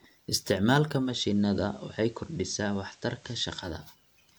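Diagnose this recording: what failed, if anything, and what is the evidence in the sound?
At 0.96 s the level drops about 3 dB, with steady hiss rising to roughly 30 dB below the signal. At 3.76 s it returns, each change taking a smooth 170 ms. This is digital radio blending to analogue at the reception stage. The hybrid receiver lost the digital stream and cross-faded to the station's FM broadcast, whose lower level and noise floor account for the quieter, hissier stretch, and then blended back.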